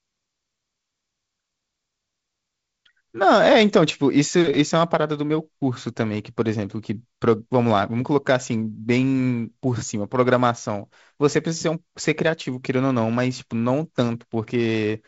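Nothing goes wrong anywhere in this speech, which comes through G.722 wideband telephone coding with its content stopping at about 7.7 kHz and a slightly noisy lower band that fits a 48 kbit/s setting.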